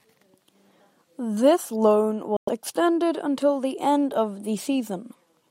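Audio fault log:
2.37–2.49 s, Bluetooth dropout: the speech drops to silence for about 0.13 s, then resumes further along, as if it had kept playing through the gap. This is likely due to late audio packets being discarded before reaching the headphones.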